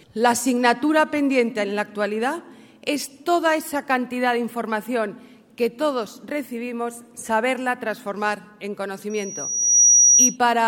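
Near the end, from 9.10 to 10.37 s, loudspeaker feedback squeal: a 5.8 kHz tone swells over about 0.7 s into a piercing whine, ending up about 10 dB above the sound.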